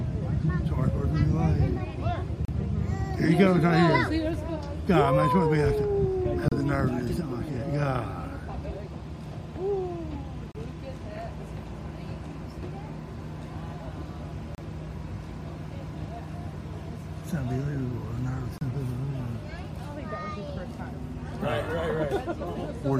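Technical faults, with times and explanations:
2.45–2.48, 6.48–6.52, 10.52–10.55, 14.55–14.58 and 18.58–18.61 s, gap at a join of encoded pieces: separately encoded 4-second pieces were spliced untrimmed, so encoder start delay plus last-frame padding remain. Each join opens a silence of about 32 to 34 ms, then the sound resumes where it stopped.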